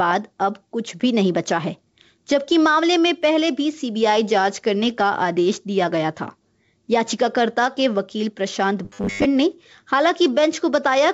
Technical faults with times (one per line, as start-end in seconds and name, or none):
0.00-11.13 gain pumping
8.85-9.26 robotic sound from repeated short buffers